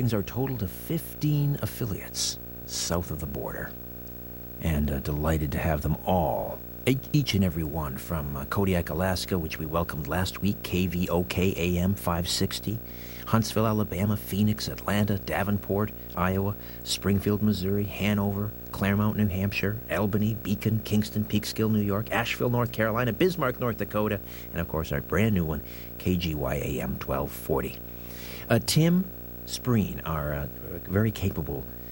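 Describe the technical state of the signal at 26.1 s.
Video or display buzz is present at 26.1 s, as it is across the whole clip: a screen or video cable is coupling into the speech path, adding a buzz at the 59.94 Hz field rate with hash above it and a 15.7 kHz line-rate whine, roughly 15 dB below the speech.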